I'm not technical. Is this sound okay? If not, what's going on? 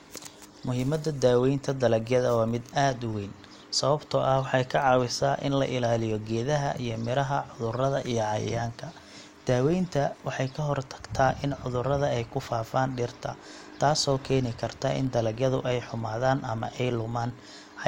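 No. Throughout the speech there is a buzz at about 43 Hz: the filter restarted on every block. It forgets where it left off and starts each short chunk from silence, ticking at the chunk rate, which fits 1024-sample blocks. The buzz grows louder with the voice.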